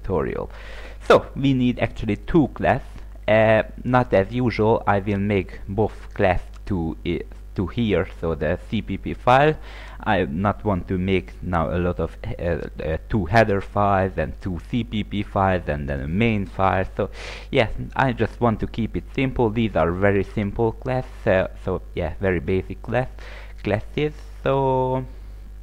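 Nothing in the audio stood out as a technical problem on listening.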